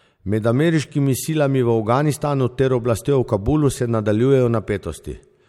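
Nothing goes wrong anywhere in this bit of speech, so there's no fault to point to at any moment.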